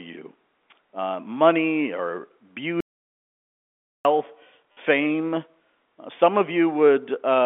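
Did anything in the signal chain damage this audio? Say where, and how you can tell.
Yes. At the input stage, the speech cuts to silence from 2.80 s to 4.05 s, about 1.25 s long. No room tone survives in the gap. This is an audio dropout to silence, likely from a lost input or link while silence kept being written.

Further along, on the network, a brief robotic stutter sits from 4.72 s to 4.77 s within the narrowband G.711 telephone coding. This is packet loss with the last packet repeated. The 50 ms stretch buzzes near 100 Hz, which fits repeated 10 ms packets.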